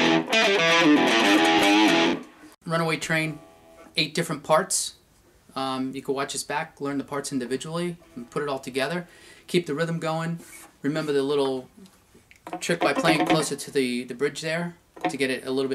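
Nothing technically wrong turns up anywhere in this audio, so there's no fault to point to and no cause to chase down.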